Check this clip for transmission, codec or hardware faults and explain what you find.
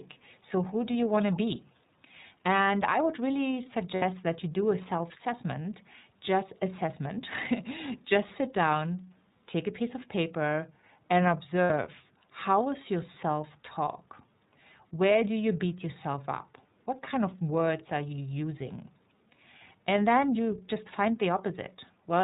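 Three faults are audible in this speech clip: iLBC coding throughout, a brief echo leak, and two short dropouts from lost iLBC frames.

The whole clip carries iLBC codec damage: band-limited below 4 kHz, clear but rough and synthetic, consistent with the 13.33 kbps, 30 ms-frame mode.

From 1.12 to 1.36 s a faint delayed copy trails by 232 ms, roughly 20 dB down, likely an echo leak from a loudspeaker-side canceller.

Lost iLBC frames at 3.96 to 4.03 s and 11.64 to 11.71 s: each 60 ms gap, fitting two frames, is concealed as a held buzzy vowel, then recovers immediately.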